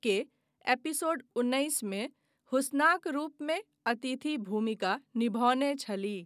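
Nothing in this recording stands out as a technical fault, so there's nothing here to walk through in time order.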